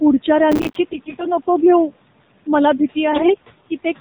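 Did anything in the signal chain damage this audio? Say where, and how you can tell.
Yes. Noise suppressor artifacts run through the whole clip, a call-processing stage. The room's background noise drops by about 17 dB between phrases and comes back up under the speech. Each short frame the suppressor judges to be mostly steady noise gets its bands pulled down.

The AMR narrowband mobile codec is also present from start to finish, at the codec stage, running at 7.4 kbps. Nothing is heard above 4 kHz, so the sound is boxed in like a phone call. The voice has a buzzy, synthetic edge, and the noise left over from suppression swirls. Both come from rebuilding speech from a vocal-tract model fed by a few pulses per subframe. At this low rate the damage is plainly audible.

Processor overload crackle appears from 0.52 to 0.76 s, at the driver or buffer stage. It comes as a gritty, tearing burst over the sound. 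There are many tiny silent gaps with hard edges, each one a buffer the processor failed to deliver on time. The gaps fit buffers of roughly 5 ms, and about thirty of them were missed. The crackle stops as soon as the load clears.

AMR bit errors occur at the network stage, from 0.92 to 1.25 s just before "नको घेऊ मला", and from 3.12 to 3.45 s just after "नको घेऊ मला". Pitch and level hold, but the voice turns hoarse, scratchy and gargly. This happens when flipped bits in the less-protected part of each frame get past the checksum and misplace the excitation pulses. The second stretch sounds rougher, which fits a higher error rate.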